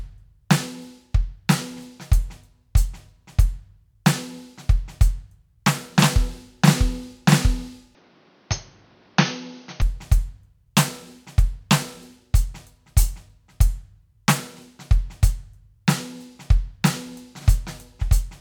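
A music clip whose sound turns dull and boxy from 7.95 s to 9.82 s, then clears again. Within that stretch nothing is heard above 6.5 kHz, the level drops by about 5 dB, and a new background noise sits roughly 30 dB below the music, with no gap at either change. That combination points to the input switched to a poorer device. The likely cause is a mid-recording change of input, to another microphone or a headset's call profile. A simple filter or EQ change would not bring its own noise floor and level shift.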